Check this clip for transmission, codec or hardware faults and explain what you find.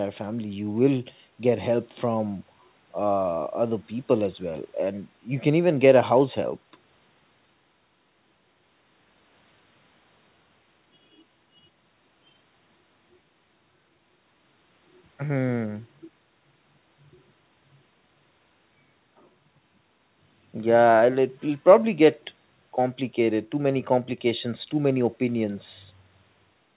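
Nothing stood out on listening to this speech, which carries the narrow, telephone-band sound of a G.711 call with nothing above 4 kHz.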